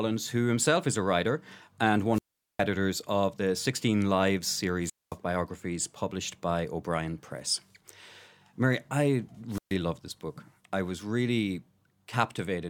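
The FM radio link faded until the receiver's squelch muted output, giving wireless microphone squelch dropouts: a hiss swell, then silence, at 2.11–2.64 s after "is a writer and" (0.41 s mute, resuming at "of the"), at 4.82–5.17 s (0.22 s mute, before "biographies published by"), and at 9.50–9.76 s (0.13 s mute, before "love this book I").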